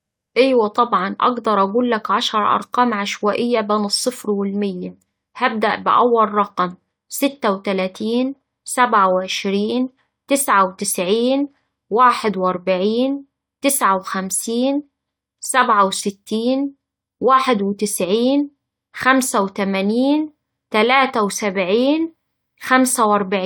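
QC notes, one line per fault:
Nothing stood out on listening.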